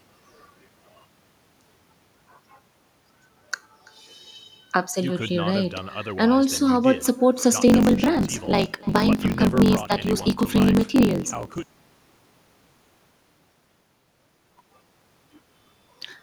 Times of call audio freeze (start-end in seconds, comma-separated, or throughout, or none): none